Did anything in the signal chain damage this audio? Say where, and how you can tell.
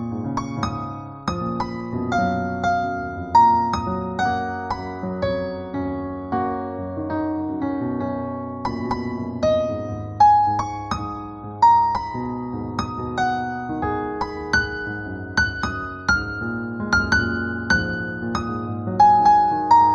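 Yes. From start to finish the sound has a hollow, phasey thinness, with the upper range oddly scooped rather than simply rolled off. A fixed notch sits around 3 kHz, with further evenly spaced dips above it that never move. This is channel delay (comb filtering): one channel runs late by roughly a fifth of a millisecond, a few samples, pointing to an offset at the driver or buffer stage. When the channels are summed to mono, shared content cancels at those regularly spaced frequencies.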